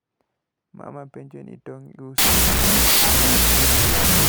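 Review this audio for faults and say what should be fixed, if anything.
From 2.18 s to the end the speech turns into loud hiss with the talker only faintly underneath, slowed to half speed and dropped about an octave. That's a wrong sample width fault: audio stored as 32-bit float is being read as 16-bit integers, so each real sample gets split into two bogus values built from mismatched bytes. That doubling is why it plays at 0.5x, and the low mantissa bytes read as integers make the noise. Preventing it means carrying the sample format in the file header or stream metadata and checking it before decoding rather than assuming 16-bit.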